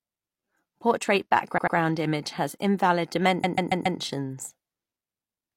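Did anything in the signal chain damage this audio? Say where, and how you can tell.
Yes: repeated frames at the codec or storage stage. A 93 ms block replays twice more at 1.54 s and a 139 ms block four more times at 3.39 s, appearing as identical, tiled waveform copies.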